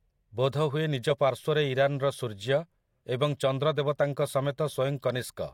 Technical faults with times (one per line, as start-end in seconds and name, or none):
none